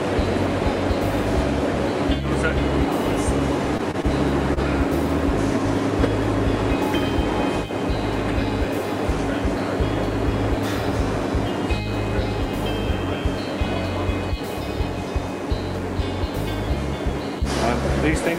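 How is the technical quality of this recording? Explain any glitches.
Four brief glitches occur, all short stalls from a late packet, at 3.77 to 3.81 s, 3.91 to 3.96 s, 4.02 to 4.06 s and 4.54 to 4.59 s. Each time the jitter buffer ran dry and the receiver held the last sound for 18, 26, 19 and 29 ms before resuming where it stopped, so nothing is lost. A held sound shows as horizontally smeared, unchanging bands on a spectrogram and as a repeating waveform stretch.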